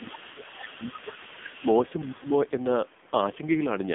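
Throughout the clip the speech has passed through the AMR narrowband mobile codec. The encoder squeezes the voice into a vocal-tract model rebuilt from sparse pulses, at a rate that fits a low AMR-NB mode around 5.9 kbps. The line passes only about 200 Hz to 3.5 kHz, and nothing above 3.6 kHz survives. The damage is heavy: the voice sounds muffled, buzzy and synthetic, with a coarse, processed grain on every syllable.

From the start to 1.22 s, speech is suppressed in double talk. The echo canceller was likely confused by both ends talking at once and pulled the whole signal down. For roughly a second in total the talker's level sinks, by about 15 dB at the deepest point, so the voice thins and fades in patches.

Over the same opening, from 0.0 to 1.84 s, the other side's voice is leaking through. A residual of the far-end voice has likely escaped the echo canceller. It sits about 15 dB below the talker as a faint second voice behind the main one.

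A brief second suppression dips the voice by about 5 dB between 1.59 and 1.65 s, roughly 70 ms of slight loss, likely again from the canceller reacting to overlapping talk.

From 2.0 to 2.34 s the other side's voice leaks through again, likely as uncancelled loudspeaker echo. This time it is stronger, about 10 dB under the talker, and audible as an intruding voice.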